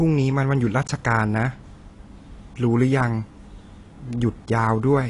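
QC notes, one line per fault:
Throughout, AAC compression: Nothing reaches above 10.6 kHz, and the speech sounds dull, smeared and plainly damaged. This is likely low-bitrate AAC-LC coding, which fits about 32 kbps. It cuts the top band and coarsely quantises the rest, leaving a fizzy, warbling texture on sibilants.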